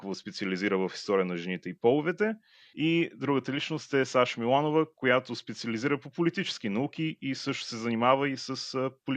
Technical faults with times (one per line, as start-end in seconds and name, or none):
none